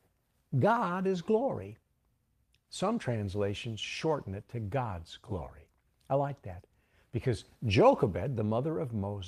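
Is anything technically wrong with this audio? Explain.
No, nothing is technically wrong with this audio.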